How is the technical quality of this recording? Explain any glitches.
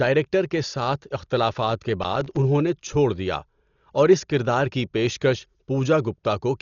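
The technical quality is poor: the whole recording is heavily coded, and there is one short glitch.

Throughout, the speech sounds dull and rough, with nothing above 7 kHz and fluttering noise around tones. This is likely heavy Dolby Digital compression at a bitrate around 40 kbps, which starves many frequency lines of detail.

From 2.02 to 2.37 s, between "کے ساتھ اختلافات کے" and "انہوں نے چھوڑ دیا", a gritty burst of tearing crackle is processor overload crackle. About 20 tiny silent gaps, fitting buffers of about 3 ms, came out late in a row.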